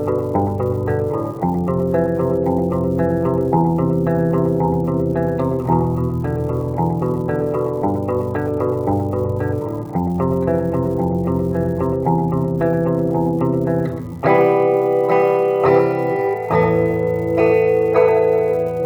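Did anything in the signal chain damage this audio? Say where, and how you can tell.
Yes, at the converter's digital data lines. An unreliable data bit adds equal spikes of about -30 dBFS throughout, so crackle continues through pauses.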